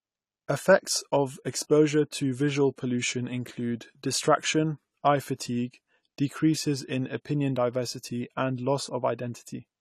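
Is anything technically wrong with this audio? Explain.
Yes. Throughout the speech, AAC compression damage is plainly audible: nothing above 14.1 kHz, and dull, smeared, warbling sibilants, likely from AAC-LC coarsely quantising spectral lines, consistent with roughly 32 kbps.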